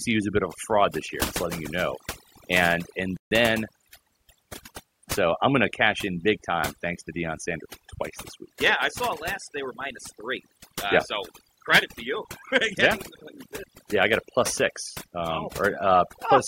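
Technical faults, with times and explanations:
Throughout, overdone noise removal: the denoiser is clamping hard on anything near its noise estimate, so individual frequency bands drop out and the softer parts of the voice vanish with them, leaving a lowered background full of twinkly specks.
3.17 to 3.31 s, playback stall: right after "you know and and", the audio cuts out for about 146 ms, then picks up again. That's likely the player running short of data or its thread getting blocked, so output simply goes silent until it recovers.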